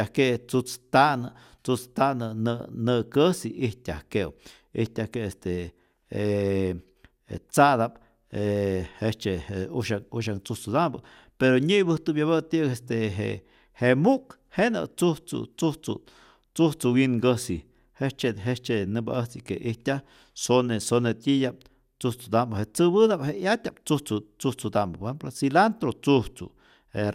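No technical faults can be heard anywhere in the speech recording. There is no point in the audio that needs a time or a measurement to describe a problem.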